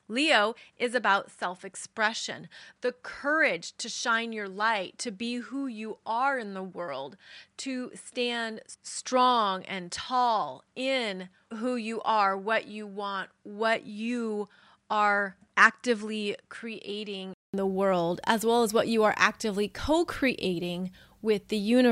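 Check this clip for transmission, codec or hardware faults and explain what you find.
One fault is present: the input switched to a poorer device. From the start until 17.54 s the speech is dull and boxy, with nothing above 10.3 kHz, a level about 5 dB lower, and its own faint noise floor roughly 50 dB below the speech. A 200 ms gap then precedes "the world as well", after which the sound opens up. This is likely a change from a narrower-band microphone to a fuller one. A spectrogram shows a hard ceiling at 10.3 kHz that lifts after the gap, and the waveform shows a short flat silence followed by a slightly taller envelope.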